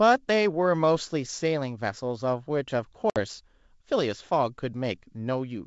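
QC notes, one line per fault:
3.10–3.20 s, packet loss on an ADPCM call: the wideband G.722 speech cuts to a hard-edged gap of about 60 ms, then returns unsteady before settling. A few packets were dropped and filled with silence, leaving the decoder's predictor and step size out of step with the sender's.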